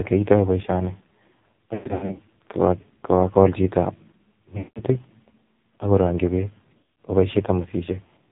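Throughout, the AMR narrowband mobile codec cuts everything above 4 kHz. Heavy buzzy, synthetic coding suggests a low rate near 6 kbps. Lost AMR speech frames cause drawn-out, fading dropouts at 1.74 to 2.20 s, 4.58 to 4.80 s and 6.78 to 7.00 s. The decoder stretches stale settings until the sound returns rough.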